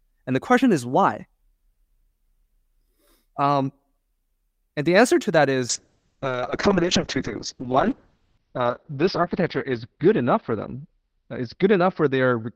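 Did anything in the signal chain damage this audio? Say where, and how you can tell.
Yes. From 5.71 s to the end, the speech turns rough and watery and loses its top end, sounding muffled above about 6 kHz where it had reached 20 kHz before. That is a call bitrate drop, which sits where the network meets the codec. The bandwidth estimate fell, so the Opus encoder was pushed from 64 kbps down to 6 kbps, held at that floor for about 3 s. At so few bits it codes coarsely and trims the high band.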